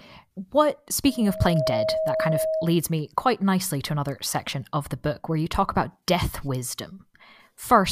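Loudspeaker feedback squeal runs from 1.06 to 2.82 s, ending just before "me quite nicely to". The microphone picks up its own loudspeaker, and at 636 Hz the loop gain exceeds one, so a steady tone swells over roughly half a second until it is about as loud as the speech.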